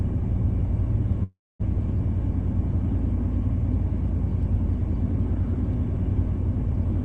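Delayed packets likely drained the jitter buffer, causing a call audio freeze from 1.23 to 1.62 s: a fading buzz, then 230 ms of silence, resuming with nothing lost.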